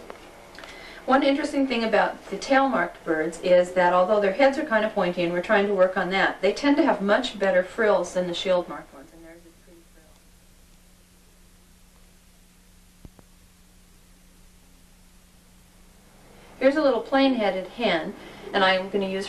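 No technical faults can be heard anywhere in this clip.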